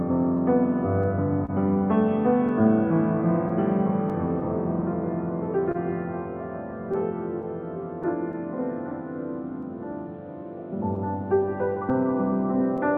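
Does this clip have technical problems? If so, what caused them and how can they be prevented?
Yes. Clock drift between sender and receiver runs through the whole clip. The sending clock is roughly 2% slower than the receiving one, so the jitter buffer keeps draining and the receiver has to pad the sound out with small repeats, which leaves the timing faintly unsteady. Locking both ends to a common clock, or using adaptive resampling, prevents this.

Repeated timing corrections run from 2.61 s to 12.93 s. They are the receiver's response to that drift: it stretches the sound to about 99% speed, adding roughly 100 ms in total through small, unevenly spaced insertions. Smooth resampling instead of piecewise repeats prevents this.

Scattered short gaps appear in three stretches: 0.37 s to 4.43 s with about seven gaps, the longest around 30 ms, then 6.93 s to 8.35 s and 10.96 s to 12.80 s with about four gaps each, mostly around 10 ms. 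Each lost or late packet was covered by extending the preceding sound, so nothing drops out, but brief ticks and smears are audible. A steadier network path or forward error correction prevents these.

A short stall from a late packet occurs at 5.72 s to 5.77 s. The buffer ran empty, and the last sound was held for 29 ms until the packet arrived, after which playback resumed without loss but about 29 ms later. A slightly deeper jitter buffer prevents this.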